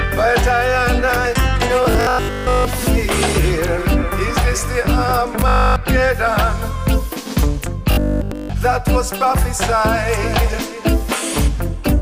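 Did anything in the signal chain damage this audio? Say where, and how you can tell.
Yes. At 1.83–2.65 s, 5.40–5.76 s and 7.92–8.54 s the sound becomes a rigid metallic 50 Hz buzz: robotic sound from repeated short buffers. The likely cause is a starved buffer replaying its last 20 ms, covering most of the first two stretches and all of the third.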